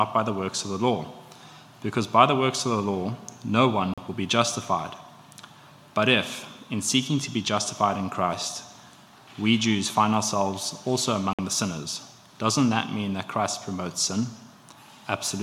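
The sound cuts out for about 40 ms at 3.94 s and again for about 53 ms at 11.33 s. The audio returns further along, as though it had kept playing through the silence. These are most likely Bluetooth dropouts, where packets failed to reach the headphones in time and were discarded. Each gap is short enough to fit a loss of only three or four packets.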